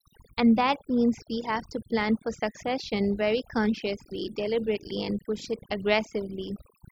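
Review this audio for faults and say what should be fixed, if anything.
Throughout the speech there's overdone noise removal: the reduction was pushed so hard that any frequency band sitting close to the noise floor gets gated away, taking quieter voice detail with it. You hear chirpy sparkles in the gaps. Next time, back off the reduction amount and take the noise profile from a clean stretch of room tone.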